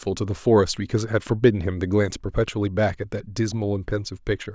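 No technical faults can be heard in this recording.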